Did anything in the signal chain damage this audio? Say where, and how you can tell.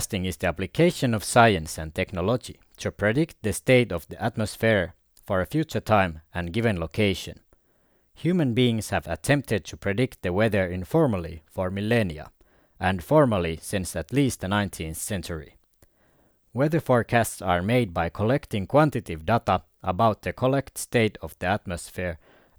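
No, nothing in this speech recording stood out on listening as a sign of damage at any stage of the signal chain.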